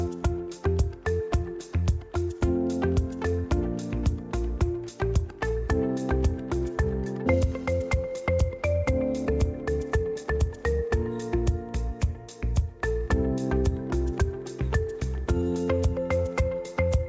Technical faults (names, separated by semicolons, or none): skip ahead; jitter buffer speed-up